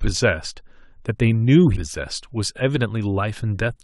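At about 1.75 s the speech lurches forward. That's compressed frames being skipped: a run of frames never reached the output, either missing from the stream or thrown out by the decoder as damaged. Around 150 ms of audio just vanishes, which fits roughly seven frames of about 23 ms each. At that point the speech simply jumps ahead.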